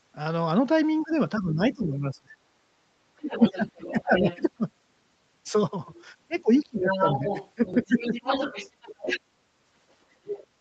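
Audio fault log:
1.0–2.35 s, 3.14–4.14 s, 6.79–8.12 s: speech suppressed in double talk. The talker's level dips in pieces, by up to about 20, 25 and 10 dB, over roughly a second in the first span and about 0.3 s in each later one. The likely cause is an echo canceller that could not tell near speech from loudspeaker echo while both sides spoke and so pulled everything down.
1.01–1.16 s, 3.22–4.39 s, 5.94–6.02 s, 6.75–9.2 s, 10.25–10.47 s: other side's voice leaking through. A second voice sits under the talker. It is faint, about 30 dB down, in the short scraps at 1.01 s and 5.94 s. It is much closer, about 10 dB down near 3.2 s and 10.3 s, and only about 5 dB down across 6.75–9.2 s. This is likely loudspeaker playback that the echo canceller left in the microphone signal.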